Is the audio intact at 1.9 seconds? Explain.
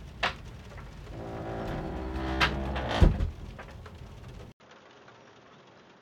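Yes, at 1.9 seconds the sound plays through intact, with no dropout, click, distortion or other fault at that moment.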